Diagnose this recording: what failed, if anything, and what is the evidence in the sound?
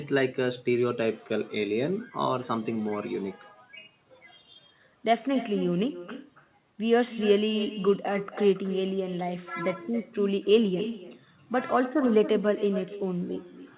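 Throughout the speech, each phrase is shadowed by a thinner copy about 13 dB down, arriving roughly a third of a second later. This is echo with no canceller in call processing: the far-end loudspeaker leaks into its microphone, and nothing removes it before sending it back.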